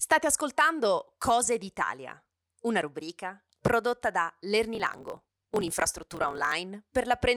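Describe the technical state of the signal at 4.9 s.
At 4.9 s the speech is inside a block size mismatch (truncated) fault, running from 4.73 to 6.54 s, just after "una rubrica prodotta da". One stage writes longer blocks than the next one reads. The tail of every block is discarded. The cuts repeat at 43.1 Hz, which fits reads of 1024 samples. They are heard as a steady buzz. The speech also runs about 1.12 times fast, with its timbre unchanged.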